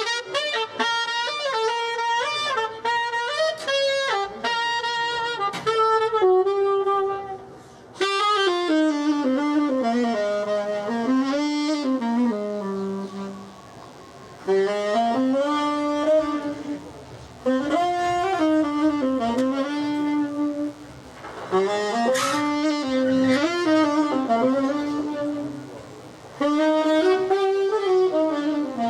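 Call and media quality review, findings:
DECT cordless phone buzz from 9.00 s to end: thin 100 Hz buzz, roughly 30 dB below signal. Nearby DECT handset or base bursting every 10 ms, rectified in the audio circuit.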